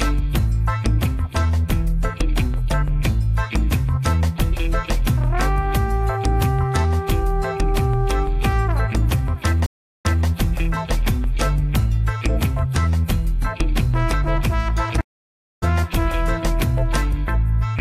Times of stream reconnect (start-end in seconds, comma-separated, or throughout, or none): 9.66-10.27, 15.01-15.64